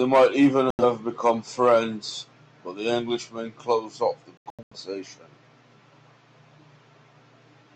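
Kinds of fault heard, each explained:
Digital broadcast dropout, 0.70 to 0.84 s and 4.37 to 4.76 s: the receiver mutes when frames fail their check, so speech cuts to silence and resumes with material skipped. The first is one 85 ms hole. The second is several short holes totalling 256 ms.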